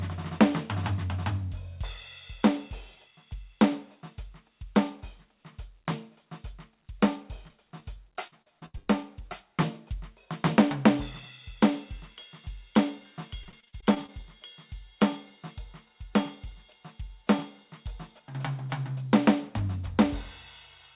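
At 7.48 to 7.51 s and again at 7.80 to 7.84 s, short concealed packet loss occurs: about 20 ms of the music each time failed to reach the decoder in time. The receiver bridged each hole by extending the sound just before it and then blending back into the real signal. Each one is heard as a brief smear or wobble in the music.

From 8.27 to 8.89 s, the damage becomes repeated packet loss with robotic sound. Five gaps fall in quick succession, the longest close to 0.1 s, and about 45% of the stretch is patched rather than received. The music turns choppy, with pieces dropping out. A second run at 13.43 to 14.10 s has eight shorter gaps, none over 42 ms, with about 28% concealed. It gives a lighter but similar stuttering, robotic texture. Throughout, the music stops at about 4 kHz, which fits a narrowband call codec.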